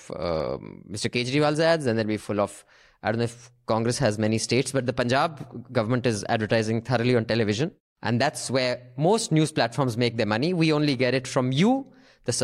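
No technical faults occur at any point in the speech, so there is nothing to describe in time order.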